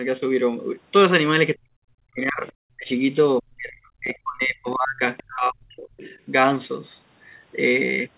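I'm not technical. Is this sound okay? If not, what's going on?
No. The voice sinks away or cuts out in patches from 1.55 to 2.46 s, 2.75 to 2.9 s, 3.39 to 5.01 s and 5.25 to 5.91 s. This is speech suppressed in double talk: both people likely spoke at once, and the call's echo remover turned the talker down too.

Faint scraps of a second voice slip in at 2.47, 5.17 and 5.97 to 6.18 s. This is the other side's voice leaking through, likely from the talker's loudspeaker into the microphone, where the echo remover missed it.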